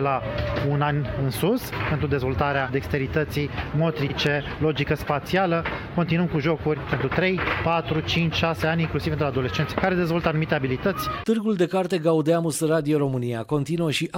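At 4.09 s to 4.14 s there are repeated frames. A 46 ms block of the compressed stream was delivered twice, so the decoder plays that slice of sound and then plays it again right away, which fits two compressed frames. The result is a brief stutter that adds 46 ms to the timeline. Unlike a dropout, nothing goes missing or silent. The same fragment simply plays again.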